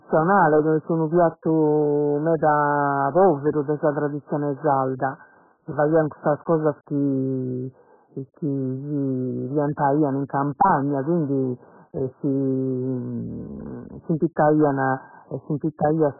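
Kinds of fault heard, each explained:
Hard clipping: The speech is driven about 11 dB past the level the chain can pass, so its loudest peaks are sliced flat. Only a small fraction of the waveform is cut, but those flat tops add high harmonics, heard as a gritty crackle on louder syllables throughout.
AAC compression: The audio is dull and band-limited, with nothing above 1.7 kHz, and has a smeared, warbling texture from coarse spectral quantisation. The cause is likely AAC-LC coding at a very low bitrate, which fits something near 8 kbps, leaving heavy codec damage across the whole clip.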